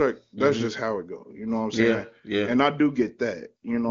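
Nothing stood out on listening to this speech, and the absence of any content above about 7.2 kHz fits an AMR wideband (HD Voice) path working as intended at a high rate.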